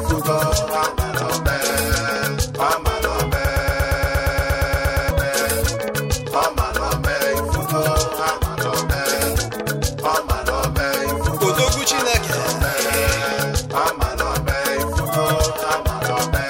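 From 3.45 s to 5.11 s the audio falls into a broken-record loop: a fragment of about 0.12 s repeats exactly, back to back, 14 times, producing a rapid mechanical stutter instead of the sound that should have played there, which is lost. The likely cause is a stalled player, encoder or stream that kept resending its last buffered chunk. On a waveform the stretch shows identical, evenly spaced blocks; on a spectrogram, a striped pattern repeating every 0.12 s.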